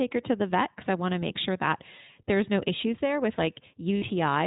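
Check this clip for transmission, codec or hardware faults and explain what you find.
Two faults are audible: iLBC coding throughout, and a short packet loss near the end.

The iLBC codec runs the whole way through. It codes each frame on its own, which fits 20 ms frames at 15.2 kbps, and passes nothing above 4 kHz. The speech is muffled, slightly rough and synthetic. Unlike a plain narrowband filter, the graininess comes from coarse excitation coding.

Lost iLBC frames occur from 3.96 to 4.04 s, just after "no issues there with". About 60 ms is missing, which fits three lost 20 ms frames. The decoder repeated the last pitch cycle with noise, producing a held, buzzy vowel. The voice is right again almost at once, unlike codecs whose damage lingers into later frames.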